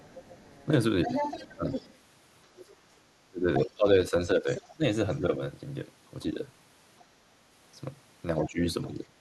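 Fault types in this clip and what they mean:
Other side's voice leaking through: A second voice runs under the talker from 0.00 to 5.17 s at roughly 10 dB below the speech, and a much fainter scrap, around 35 dB down, appears between 6.99 and 7.04 s. This is likely far-end audio from the talker's own loudspeaker reaching the microphone and surviving the echo canceller, which left a residual about 10 dB down in the first stretch and only a trace later.
Speech suppressed in double talk: The talker's level dips in three places: from 0.66 to 1.72 s, in short patches totalling about 150 ms with the deepest drop near 10 dB; from 3.27 to 5.41 s, about a second in all with drops near 20 dB; and from 8.46 to 9.16 s, about 300 ms down by roughly 25 dB. The likely cause is the echo canceller failing to separate near-end speech from overlapping echo and attenuating both.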